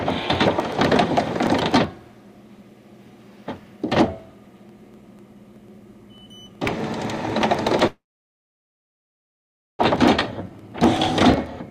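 From 0.10 s to the end, periodic USB or driver dropouts put a regular tick into the audio every 0.124 s, about eight per second. Something blocking the audio path at a fixed interval skips a tiny slice each time instead of filling it with silence, so the waveform jumps straight ahead and clicks. Random glitches would be scattered, but these are metronomically even, and they are audible only while sound is present.

At 7.87 s the audio stalls, and the last sound is stretched into a short fading buzz that drops to silence lasting about 1.8 s. At 9.81 s it resumes exactly where it stopped. This is most likely a call audio freeze, where delayed packets left the jitter buffer empty. Unlike packet loss, nothing is cut out. Instead, roughly 1.9 s of gap is inserted, so everything afterwards arrives that much later.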